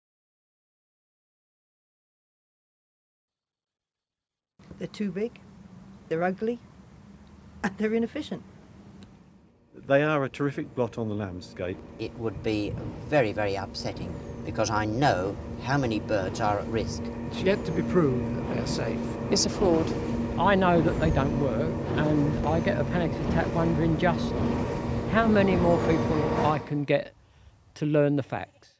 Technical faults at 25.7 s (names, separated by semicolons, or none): none